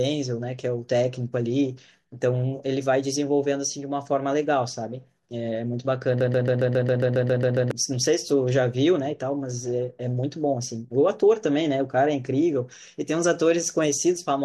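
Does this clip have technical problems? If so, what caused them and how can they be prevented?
Yes. From 6.21 to 7.71 s the speech becomes a broken-record loop: a 136 ms fragment repeats 11 times back to back, identical on each pass, and the speech that belonged in that span is lost. The likely cause is a stalled player or stream resending the last fragment it held. Unlike an echo, the copies neither fade nor overlap fresh sound. Deeper buffering, plus stall handling that mutes instead of repeating, would prevent it.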